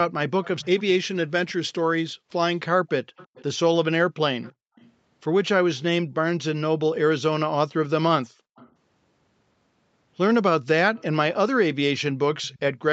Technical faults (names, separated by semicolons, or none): echo leak; background gated by the echo canceller